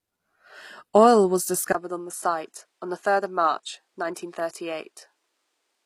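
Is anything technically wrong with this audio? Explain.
Yes, the clip has two audible problems.

HE-AAC compression runs through the whole clip. The likely cause is low-bitrate HE-AAC coding, which fits a rate of around 24 kbps. The codec keeps only the lower spectrum and synthesises the treble by copying lower bands upward under a coarse envelope. Here the result is plainly audible: the top end sounds bright but false, with nothing above 15 kHz, and sibilants come out gritty and metallic where the copied harmonics fail to line up.

The input switched to a poorer device at 1.73 s and stays that way to the end. The cause is likely a change of input to a different microphone or headset mode. There is a gap of about 20 ms at the changeover. After it, the speech is about 5 dB quieter, duller and boxier, with nothing above 11.4 kHz. A faint new background noise also appears, roughly 50 dB below the speech, because the replacement device has its own noise floor.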